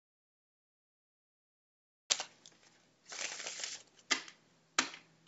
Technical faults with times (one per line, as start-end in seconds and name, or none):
0.00-2.10 audio dropout to silence